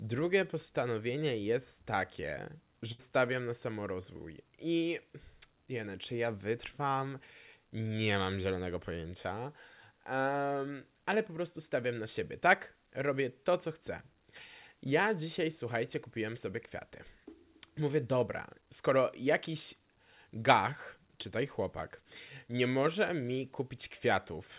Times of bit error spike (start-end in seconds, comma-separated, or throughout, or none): none